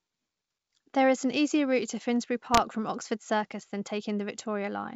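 At about 2.47 s the speech picks up bit errors on an ADPCM link, running to roughly 2.60 s. A few tenths of a percent of bits get flipped, and each one knocks the decoder's step size and predictor off, so you hear pops and a rough, level-jumping burst on the G.722 wideband signal.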